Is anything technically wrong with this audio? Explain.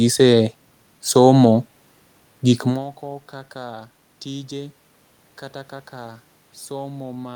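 No, the speech signal shows no technical fault: the steady room noise belongs to the recording space, and the change in level around 2.5 seconds comes from the talker moving relative to the microphone rather than from the system.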